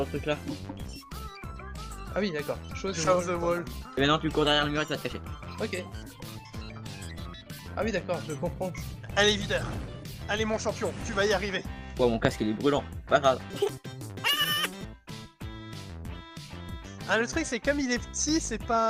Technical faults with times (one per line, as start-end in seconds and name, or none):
5.87-5.93 AAC frame loss with concealment
13.50-14.85 section at the wrong speed